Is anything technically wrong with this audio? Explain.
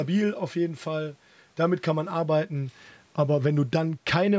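No, nothing technically wrong stood out on listening to this speech.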